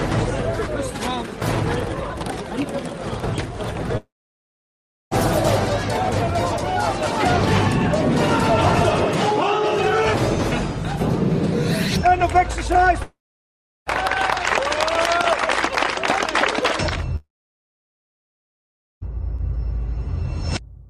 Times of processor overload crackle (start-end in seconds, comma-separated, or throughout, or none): none